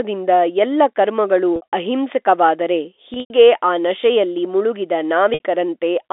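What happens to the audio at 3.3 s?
Packet loss with pitch repetition ends there. It runs from 3.14 to 3.30 s, with about 120 ms missing across a 160 ms stretch, which fits 20 ms packets. The receiver fills each gap by repeating the last pitch period of the speech. The shorter gaps sound like a briefly held, buzzy tone. The longest run, 100 ms, outlasts the roughly 50 ms fade, so it drops to silence before the speech cross-fades back in.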